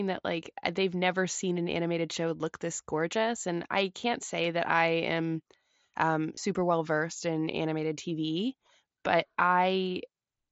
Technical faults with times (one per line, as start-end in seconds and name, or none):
4.44 concealed Bluetooth headset packet loss
6.35-6.37 concealed Bluetooth headset packet loss